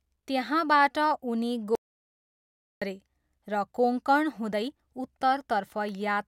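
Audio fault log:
1.75–2.82 s, audio dropout to silence: The speech cuts off mid-flow and the signal falls to silence for about 1.06 s. No room tone or hiss remains in the gap. The sound then returns just as abruptly. The input was likely lost for that second, through a brief disconnection, a failed link or a stray mute, while the recorder kept writing silence. Whatever was spoken in that stretch is gone.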